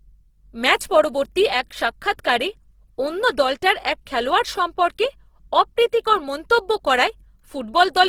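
Opus compression runs throughout the speech, plainly audible as a rough, grainy texture. With so few bits, the likely cause is an encoder in music mode that fills starved bands with folded or noisy content rather than leaving holes. The damage fits a rate around 16 kbps, while the bandwidth still reaches about 20.2 kHz.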